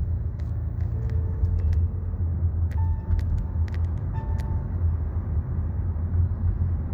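The signal carries no audible technical faults at any point, with level, continuity and bandwidth holding steady throughout the audio.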